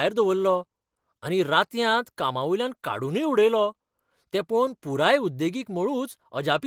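Nothing technically wrong turns up anywhere in this short speech recording, so there's no problem to pin to a time or trace back to a cause.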